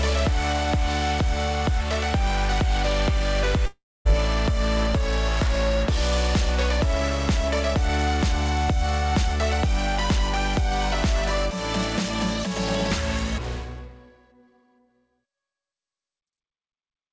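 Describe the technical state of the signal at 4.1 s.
At 4.1 s the audio has just resumed after a gap from 3.66 to 4.07 s, likely a long network dropout. The last sound was stretched into a fading buzz, then about 0.23 s of silence.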